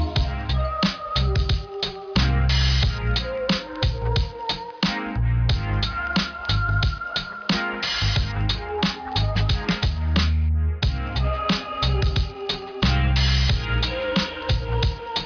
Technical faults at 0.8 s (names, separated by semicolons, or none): aliasing